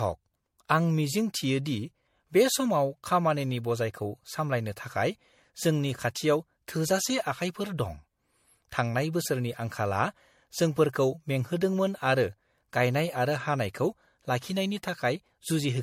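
A speech recording that sounds swirly, smeared and hollow from start to finish, with blurred consonant attacks and nothing above 16.5 kHz. This is likely generation loss from MP3 encoding repeated about four times, consistent with a 64 kbit/s MP3 chain.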